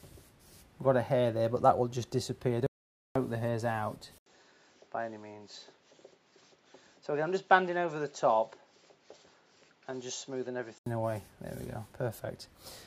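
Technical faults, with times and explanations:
2.67–3.16 s, audio dropout to silence: the sound stops dead and is replaced by silence for about half a second, with no room tone or background underneath, then resumes mid-flow as abruptly as it left. Whatever was happening in those 0.49 s is simply missing. The likely cause is a brief loss of the input, such as a link failure or momentary mute, while the recorder kept writing silence.
4.18–10.86 s, input switched to a poorer device: after a short 80 ms gap at 4.18 s, the sound returns duller and somewhat quieter, about 5 dB down, with nothing above 7.6 kHz and a faint new background noise sitting far below the signal. At 10.86 s the brighter, fuller tone comes back. This is likely the system changing over to a different, narrower-band input device and later returning to the original one.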